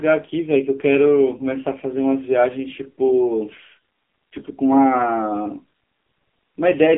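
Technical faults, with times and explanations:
Throughout: AMR narrowband mobile codec. The band runs from 250 Hz to 3.4 kHz, and the heavily buzzy, synthetic pulse-driven speech fits a low AMR-NB mode near 6.7 kbps.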